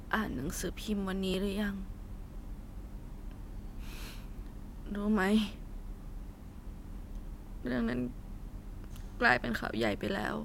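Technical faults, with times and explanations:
1.34 to 9.6 s, clock drift buffer slips: A short click recurs about every 1.37 s while the speech runs, around seven in all. The steady spacing is the giveaway. The likely cause is two devices on separate clocks that disagree by roughly 1000 parts per million. The buffer between them slowly fills or drains until roughly 70 samples are dropped or repeated at once. Each jump breaks the waveform and is heard as a click.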